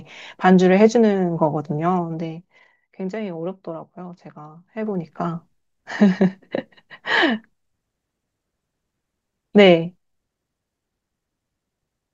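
Zipper noise runs from 1.84 to 2.82 s as the speech level drops by roughly 10 dB, and again from 4.52 to 5.16 s as it rises by about the same amount. The gain moves in unsmoothed 1 dB jumps, around twenty a second, and each jump leaves a small click, so a fast ticking rides on the speech while the level changes.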